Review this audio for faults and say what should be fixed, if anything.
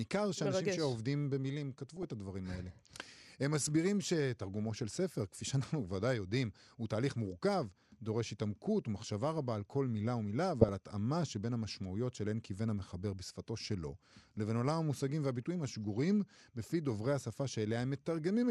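Throughout the recording, MP2 compression at too low a rate starves the 32 sub-bands of bits, so the upper bands drop out and the remaining ones are quantised coarsely. The speech sounds dull and carries a gurgling, grainy edge that is plainly audible, and the coding is likely MPEG Layer II at a rate around 80 kbps. To prevent it, encode at a higher bitrate or use a more efficient codec.

DAB burbling appears at 1.97–2.12 s and again at 10.61–10.69 s. Bit errors at a fraction of a percent slipped past error correction into the MP2 data, corrupting samples. This produces short blips of noise in single sub-bands over the speech. The first burst spans about ten frames and the second a few. To prevent it, improve reception or the antenna, or use a stronger error-protection level.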